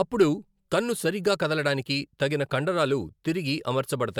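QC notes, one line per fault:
Throughout, generation loss: the speech sounds swirly, smeared and hollow despite content reaching 20 kHz, with blurred attacks. It points to about three MP3 passes near 140 kbit/s, likely re-quantised each time on shifted frame grids, piling up noise and spectral holes.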